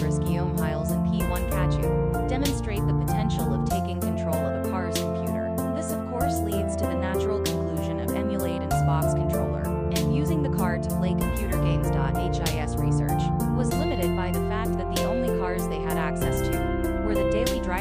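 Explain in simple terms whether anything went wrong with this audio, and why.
Nothing went wrong here; no faults can be heard.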